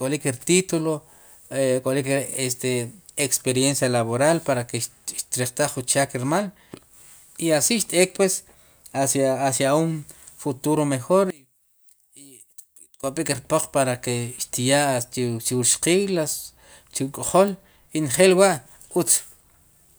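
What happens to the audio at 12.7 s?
At 12.7 s you're in the middle of a short stretch, from about 11.30 to 13.04 s, where the speech suddenly drops by about 18 dB and turns faint and distant, as if the centre of the sound has been scooped out. That's most likely one channel inverted: with one side's polarity flipped, everything common to both channels cancels when they're summed to mono, leaving only the faint difference between them.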